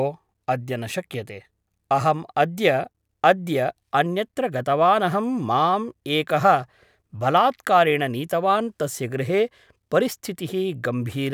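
No technical faults are audible anywhere in the speech recording.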